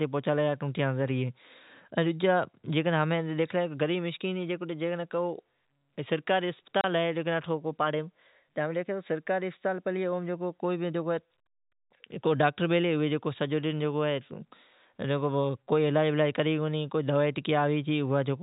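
At 6.81 to 6.84 s the speech drops out abruptly, with hard edges. This is packet loss filled with silence: one 30 ms packet never arrived and the receiver played silence in its place.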